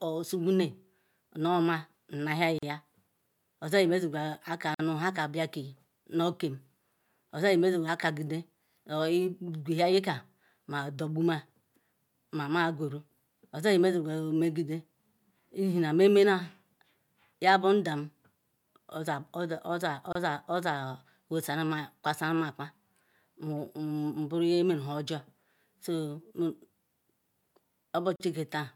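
Gaps at joins of encoded pieces fall at 2.58 s, 4.74 s, 20.13 s and 28.16 s, lasting about 41, 50, 27 and 40 ms. The speech was encoded in separate pieces and spliced untrimmed, so encoder delay and end padding leave short silences with smeared edges.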